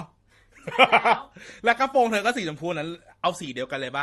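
From start to finish the speech carries a mix of coding artefacts that do not come from a single encoder, heard together with a dull, band-limited top end. This points to transcoding between lossy codecs, likely an MP3 encode at around 48 kbit/s later re-encoded as Opus at around 32 kbit/s. The second pass spends bits reproducing the first codec's damage, keeps the lowest cut-off in the chain, and adds its own.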